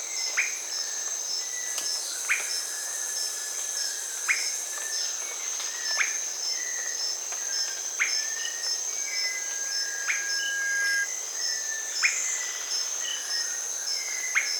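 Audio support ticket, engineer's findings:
Loudspeaker feedback squeal, 8.98–11.10 s. Single 1.6 kHz tone swelling over about two seconds to roughly 5 dB above programme. Mic hearing its own speaker, loop gain above one at that frequency. Steady pitch and gradual build distinguish it from interference whine.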